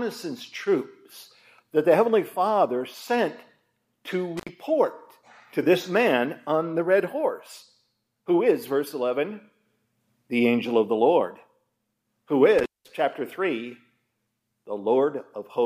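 The audio has two intermittent contact faults, at 4.37–4.49 s (open for 71 ms) and 12.59–12.92 s (open for 189 ms), where a loose cable or plug briefly breaks the signal path. The sound drops out with crackle at the edges, which shows on a spectrogram as vertical broadband streaks around a gap in the waveform.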